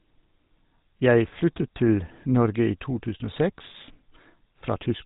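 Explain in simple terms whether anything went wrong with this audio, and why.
The speech has been through the GSM full-rate codec, the old digital mobile phone format, and the damage is plainly audible for the entire clip, from start to finish at about 5 seconds. Everything above 4 kHz is gone, which makes it sound muffled and phone-like. The codec also rebuilds the voice from a crude pulse pattern rather than the real signal, which gives it a buzzy, gravelly roughness.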